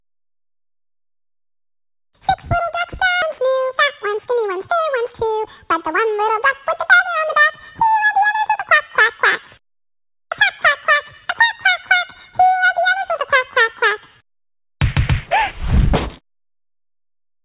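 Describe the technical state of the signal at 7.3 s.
At 7.3 s the signal is intact, carrying only the ordinary narrowband character of the call path, with nothing above about 4 kHz, which fits a G.711 A-law link.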